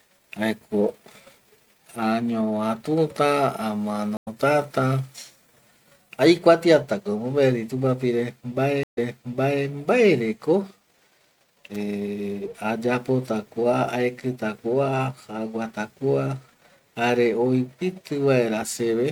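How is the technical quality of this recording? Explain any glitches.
The recording has three glitches. There are two stream reconnects and one electrical switching spike.

Stream reconnects occur at 4.17–4.28 s and 8.83–9.65 s. The connection dropped, and a fresh decoder restarted mid-stream. The first leaves a 93 ms gap and skips slightly ahead. The second leaves 133 ms of silence, then jumps back 679 ms, repeating audio.

At 11.75 s there is a sharp snap laid over the speech. This is likely an electrical switching spike picked up from nearby equipment.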